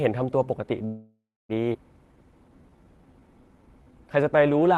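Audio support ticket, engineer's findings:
Call audio freeze, 0.85–1.52 s: sound stalls into a fading buzz, about 0.27 s of silence, then resumes where it stopped with nothing lost. Likely packets delayed in transit, jitter buffer ran empty; adds 639 ms latency.

Skip ahead, 1.73–1.77 s: abrupt forward jump, about 0.4 s of speech missing, both sides spliced almost directly with a 6 ms fill. Jitter buffer discarded the stretch, or it was lost in transit, while later audio already queued.

Jitter buffer slow-down, 2.05–4.64 s: speech runs at 87% speed, pitch unchanged, sounds audibly drawn out. Jitter buffer repeating single pitch periods and pause fragments to rebuild reserve; 335 ms added.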